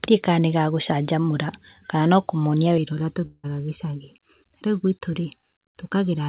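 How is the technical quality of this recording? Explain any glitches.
Two faults stand out from about 2.8 s onward, both heard through a band that stops at 4 kHz. That limit fits a narrowband call codec such as G.711 mu-law.

Channel delay (comb filtering) runs from 2.78 s to the end of the clip. One channel lags the other by under a millisecond, and the two are summed to mono. Components common to both cancel at evenly spaced frequencies, with the first notch around 700 Hz and further ones at regular intervals above it. The result is a hollow, phasey tone that stays fixed for the rest of the recording.

A long network dropout occurs from 3.26 s to 3.46 s. About 180 ms of audio never arrived, which is likely due to lost packets on the call path. The receiver's concealment carried the last sound forward for 174 ms as a decaying tail. About 40 ms of silence followed before the signal resumed. 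The audio picks up further along, and the missing portion is simply gone rather than delayed.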